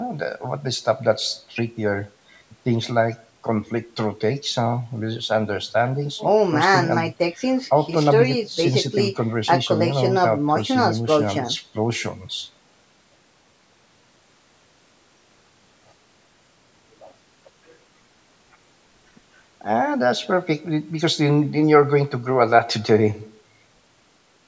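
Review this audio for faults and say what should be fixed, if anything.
Nothing here needs fixing: the speech simply carries the usual signature of call microphone processing, with the lowest bass trimmed and nothing above 8 kHz, which is just how that path behaves.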